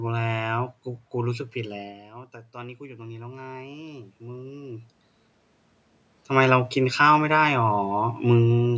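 Automatic gain rising sets in from 1.55 to 4.94 s in this speech clip. After the talker moves back from the microphone around 2 s, the input falls by about 15 dB. The call's gain control responds slowly, raising its gain by about 8 dB over more than three seconds. The voice and the room noise swell together through that stretch rather than the level snapping back, and the voice still ends up quieter than before the move.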